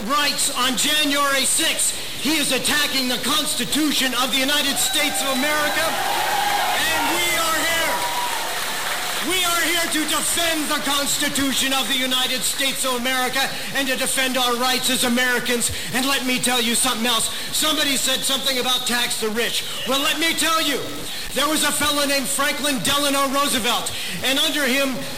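From start to finish the sound carries a harsh, buzzy distortion. Quiet passages do not fall silent; they fill with a steady noise floor instead. This points to a likely stuck bit. One bit of each sample stays fixed at 0 or 1. About half the samples land wrong by that bit's weight, a step of roughly -25 dBFS. Because the stuck bit is a high one, it buzzes rather than hisses.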